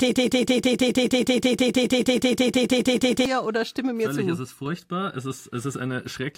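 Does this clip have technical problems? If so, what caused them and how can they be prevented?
Yes. A broken-record loop is already under way when the speech clip begins and runs from 0.00 to 3.26 s. A fragment of about 159 ms repeats back to back 20 times, and whatever should have played in that span is missing. The likely cause is a player, encoder or stream that stalled and kept resending the last fragment in its buffer. Watchdog checks that detect repeated buffers and flush or restart the stalled stage would prevent it.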